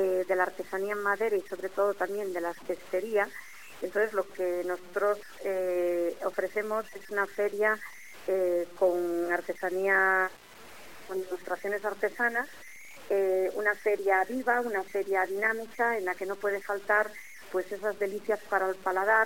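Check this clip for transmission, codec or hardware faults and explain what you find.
One fault runs through the whole clip: low bit depth without dither. Quiet passages sound grainy and gritty, with error noise only about 25 dB below the signal. This fits 7-bit samples, likely truncated without dither.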